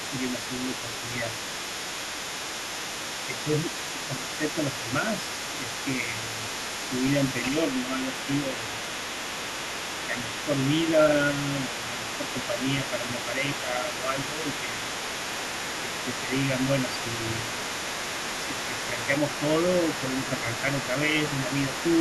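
A second voice runs underneath the speech from the very start to the end, sitting roughly 10 dB below it. This is the other side's voice leaking through. The talker's device is likely playing the far end on a loudspeaker, and the echo canceller is not removing all of that sound before it reaches the microphone, so the residue carries along with the near-end speech the whole way through.

From 0.39 to 1.27 s, 3.27 to 6.33 s, 7.42 to 8.75 s and 10.08 to 14.82 s, the main speech dips briefly while that second voice is active. The drops reach around 5 dB and come in short pieces rather than continuously, adding up to a few hundred milliseconds in the earlier spans and about a second and a half in the longest. This is speech suppressed in double talk. With both sides talking at once, the canceller likely could not tell its own talker from the loudspeaker echo and turned everything down together.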